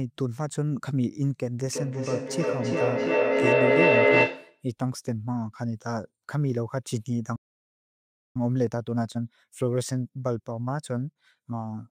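From 1.65 to 4.68 s there is feedback echo between two devices. Another device in the room replays this microphone's sound, which is picked up again, so each phrase returns roughly every third of a second. The repeats build to about 7 dB above the speech. Unlike room reverberation or a single echo, they are discrete, evenly spaced and growing rather than fading.

From 7.35 to 8.37 s a playback stall leaves about 0.99 s of silence in mid-flow, likely because the player ran out of buffered data or its thread was blocked. The audio stops cleanly and then resumes, so it is a gap in output rather than the crackly fragments of packet loss.

From 8.37 to 11.37 s, time-compressed catch-up follows. The player clears its backlog by cutting and cross-fading small slices, running at 1.1 times normal speed. The pitch stays normal. A plain speed-up would raise the pitch instead.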